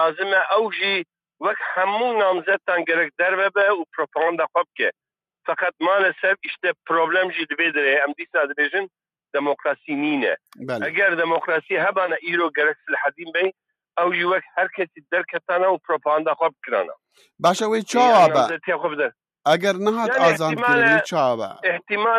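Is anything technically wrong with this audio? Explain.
No, there are no technical faults.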